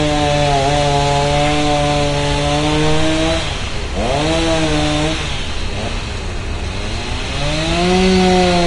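Vorbis compression runs throughout the clip, likely the cause of its hissy, grainy texture. The encoder seems to have dropped the high cut-off and coarsely quantised the treble, turning fine detail into noise, with roughened tones and smeared attacks that fit a low bitrate around 34 kbps.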